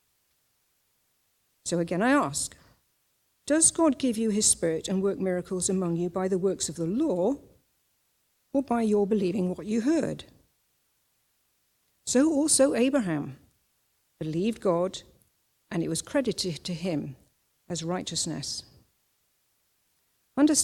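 No technical faults can be heard anywhere in the audio, and the signal stays intact and steady throughout.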